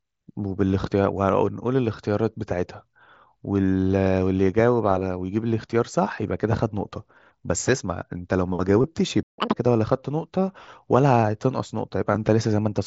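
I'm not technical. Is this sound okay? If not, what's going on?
No. At 8.82 to 8.84 s the speech briefly turns into a short buzzy, held tone. That is concealed Bluetooth headset packet loss: a few bits of audio between headset and phone went missing, and the phone filled the gap by repeating the last fraction of sound.

At 9.23 s the speech suddenly cuts to silence for about 0.15 s, then resumes at 9.38 s. This is a playback stall, likely because the player ran short of audio data or was briefly held up and had nothing to play.

From 9.38 to 9.54 s the speech plays at double speed and sounds high and squeaky, raised by nearly an octave. That is catch-up at higher speed: after the stall, the player rushes through the audio that piled up to get back on schedule.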